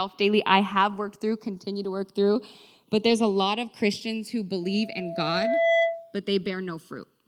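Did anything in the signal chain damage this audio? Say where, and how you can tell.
Yes. At the converter stage, the two channels were captured by devices running on separate clocks, which disagree by roughly a hundred parts per million. The delay between the channels therefore creeps throughout the clip, reaching a bit under a millisecond by the end. Summed to mono, that sliding delay moves the comb-filter notches slowly through the spectrum. This channels drifting apart fault is audible as a slow, continuous flanging sweep over the speech.

On the network side, a packet was lost, and the decoder filled it from the forward error correction copy carried in the following packet. The span from 3.09 to 3.11 s lasts 20 ms, which points to a single lost packet rebuilt from error correction. There is no gap, but that short stretch sounds rougher and noisier than the surrounding audio because the low-bitrate copy holds less detail than the original frame.

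In playback, a microphone picked up the loudspeaker it was feeding, and at 668 Hz the loop gain exceeded one. From 4.63 s a single tone at that frequency swells over about a second. It then holds at around 10 dB above the speech until it stops at 6.18 s, presumably when the loop was broken. This loudspeaker feedback squeal is heard as a steady howl that rises out of the sound rather than starting abruptly.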